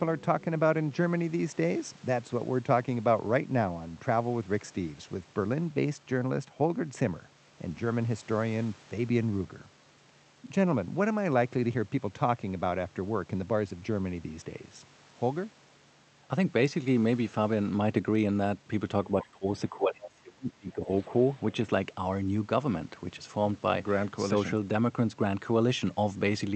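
From 19.12 s to 21.18 s the speech is pushed down in level, by roughly 25 dB at its deepest, and parts of it thin out or drop away for about two seconds in total. This is speech suppressed in double talk, likely caused by an echo canceller that, with both ends talking at once, could not tell the near talker apart from loudspeaker echo and attenuated everything it picked up.

Inside that stretch, from 19.92 s to 20.06 s, a brief fragment of a second voice comes through, sitting roughly 15 dB under the main speech. This is the other side's voice leaking through: the far-end audio playing from the loudspeaker reached the microphone and was not fully cancelled, so a short, faint scrap of it survives, likely for the same reason the near speech was suppressed. The Opus call path, running at 48 kbps, narrows the audio to about 8 kHz.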